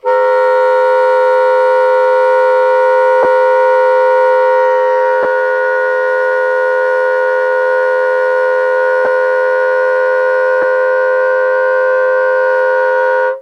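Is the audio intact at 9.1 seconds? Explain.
No. Lost LE Audio frames occur at 9.05 to 9.08 s: about 20 ms of audio went missing, which fits two dropped frames. The LC3 decoder fills the gap by reusing the last spectrum with random signs, so tonal content turns briefly into a noisy smear.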